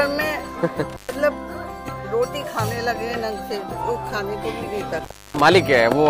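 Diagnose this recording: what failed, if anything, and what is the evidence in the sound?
Intermittent contact in the analogue wiring opens the line at 0.90–1.16 s and 4.98–5.41 s, leaving 0.12 s and 0.30 s gaps: a near-flat waveform, faint hiss on the spectrogram, and crackly edges.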